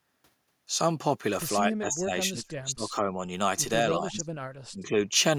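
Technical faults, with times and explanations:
1.61–3.25 s, 3.86–4.30 s, 4.71–5.10 s: speech suppressed in double talk. The speech sinks sharply in each stretch, by roughly 25 to 30 dB at its deepest. The first span lasts well over a second and the later two only a few tenths each. This is likely an echo canceller that, with both ends talking together, could not tell the near voice from loudspeaker echo and turned everything down.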